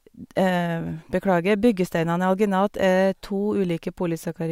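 No technical faults can be heard anywhere in the speech.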